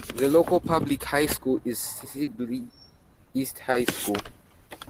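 A brief smear at 2.23 to 2.29 s and a shorter one at 3.71 to 3.75 s are short concealed packet loss: 40 ms and 20 ms of missing speech were filled by extending the preceding sound.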